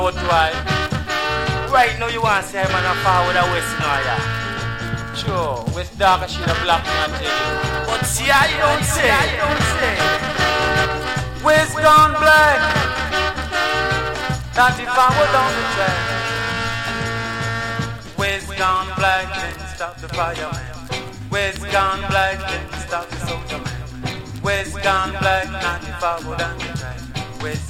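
From 8.49 to 10.85 s, a doubled audio track appears. A second copy of the same sound runs behind the original by roughly 0.7 s. It sits around 5 dB quieter and keeps the full bandwidth. It has no decay or room colour, so it does not sound like an echo. It starts and stops abruptly. The likely cause is a second capture through a slower path, or an edit that left two copies out of step.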